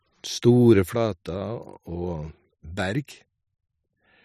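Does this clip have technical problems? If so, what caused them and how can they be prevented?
Yes. One channel drops out, likely a lost stereo feed, from 0.95 s to the end, so the mono sum loses half its shared speech and falls abruptly by about 6 dB. Securing and monitoring both channel connections during recording prevents this.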